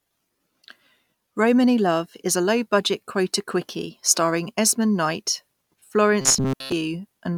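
Speech, where from 6.21 to 6.72 s the playback likely ran short of new audio and kept looping a buffer of about 7.5 ms, producing robotic sound from repeated short buffers: most of that span is a rigid, metallic 133 Hz buzz that only loosely tracks the speech.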